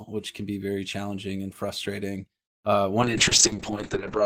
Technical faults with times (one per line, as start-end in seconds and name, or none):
3.03-4.25 call bitrate drop